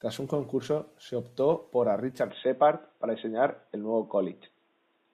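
At 2.30 s the speech abruptly turns duller and narrower and stays that way to the end. The likely cause is an input switched to a poorer device, such as a headset's call profile. There is no gap at the change and no jump in loudness. On a spectrogram, everything above about 3.8 kHz vanishes from that point, leaving a sharp horizontal ceiling. A faint new noise floor, roughly 45 dB below the speech, fills the pauses. The waveform's envelope continues without a break.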